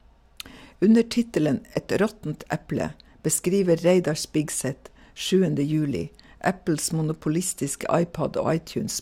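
No technical faults can be heard anywhere in the recording.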